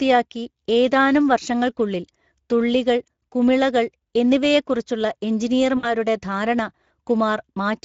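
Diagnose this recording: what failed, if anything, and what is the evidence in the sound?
Speex codec damage, codec stage: the speech is plainly hoarse and noisy throughout, from coarse excitation coding, which fits a mid-rate setting near 16.8 kbps.

VoIP packet loss concealed by the speech codec, network stage: from 5.77 to 5.94 s the speech is stretched and fades. About 60 ms was lost, fitting three frames, and the decoder extrapolated pitch and filter while the voice recovered slowly.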